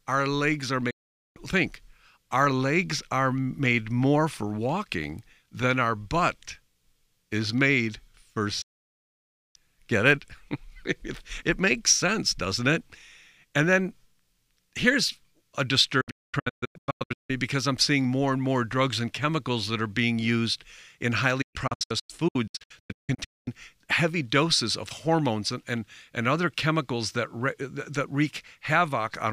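Digital broadcast dropouts occur where the receiver lost valid frames and muted. Speech cuts out with an 8 ms fade at 0.90–1.37 s and 8.62–9.56 s, then breaks into scattered holes of up to 0.22 s across 16.01–17.30 s and 21.42–23.48 s.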